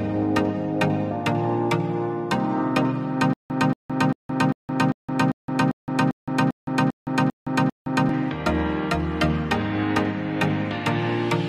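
From 3.33 s to 8.09 s the audio catches on itself: a fragment of about 231 ms plays, then about 165 ms of dead digital silence, and the same fragment returns, twelve times at an even beat of roughly 397 ms. This stutter with silent gaps likely comes from a stalled player or stream that replayed its last buffered piece at each retry before running empty, so the material belonging to those seconds never plays.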